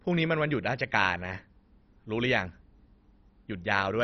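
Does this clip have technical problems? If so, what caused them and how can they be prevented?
Yes. Throughout the speech, nothing is present above 6.1 kHz, and the remaining sound has a dull, gurgling, granular quality. The likely cause is heavy MP2 compression. With too few bits, the encoder switches off the upper sub-bands entirely and coarsely quantises those it keeps, and the damage here points to a bitrate of around 32 kbps. To prevent it, encode at a substantially higher bitrate or use a more efficient codec.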